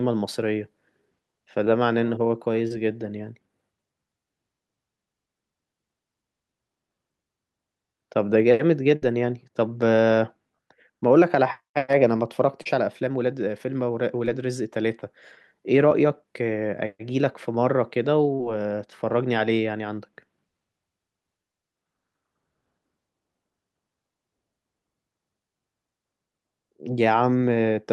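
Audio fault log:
2.67, 12.62, 14.25, 15.89 and 18.35 s: short concealed packet loss. Brief smears or wobbles, as 20 to 40 ms of missing audio was patched by extending the preceding sound.
8.96 to 9.04 s: burst of packet loss. A held buzz or fading hiss, then a jump ahead: about 60 ms went missing and was filled by stretching the last sound.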